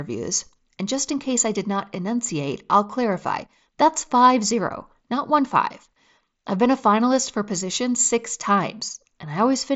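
No technical faults can be heard in this speech.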